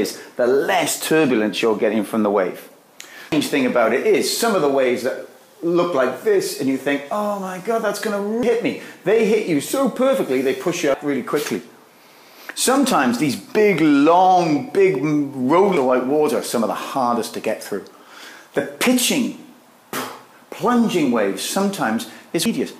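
At 3.32, 8.43, 10.94, 15.77 and 22.46 s there are brief blips from damaged data in a compressed stream: corrupt frames are misdecoded until the decoder regains sync. Each appears as a thin broadband vertical streak on a spectrogram and a sharp, discontinuous spike in the waveform.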